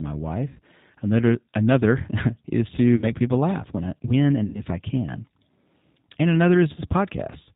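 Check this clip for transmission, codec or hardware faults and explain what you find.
Two faults are present: the speech runs through a low-bitrate G.729 codec for the whole clip, and VoIP packet loss concealed by the speech codec breaks in four times.

The G.729 codec at 8 kbit/s models each 10 ms frame as a vocal tract filter, pitch predictor and a few pulses, and discards everything above 4 kHz. The result is plainly audible: dull, slightly rough, synthetic-sounding speech throughout.

VoIP packet loss concealed by the speech codec occurs at 0.48–0.59 s, at 2.96–3.06 s after "is to" and before "people laugh when I", at 4.46–4.63 s after "laugh when I when" and before "I can", and at 6.74–6.79 s. Audio went missing each time, about 80, 60, 80 and 20 ms, which fits roughly four, three, four and one lost packets. The decoder stretched its last pitch and filter state with falling gain, so each gap becomes a fading buzzy tone or coloured noise, and the speech stays weakened briefly afterwards.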